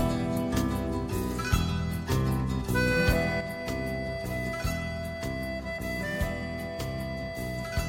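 At 3.41 s the sound suddenly falls by about 6 dB and stays quieter to the end. The likely cause is that one channel drops out, halving the material common to both channels in the mono sum.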